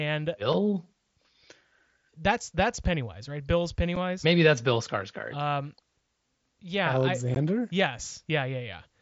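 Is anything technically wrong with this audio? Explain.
Yes. Unconcealed Bluetooth headset packet loss occurs at about 3.96 s and 7.35 s in this speech. Lost voice packets between headset and phone were replaced with silence or an idle pattern rather than smoothed over. The gaps last 7.5 ms and 15 ms, matching one and two missing frames, with abrupt edges. Concealed loss would smear or repeat sound to fill these gaps instead. The mSBC wideband link adds only its light graininess.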